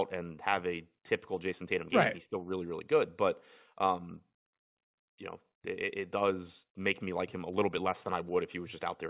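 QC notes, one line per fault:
No faults heard.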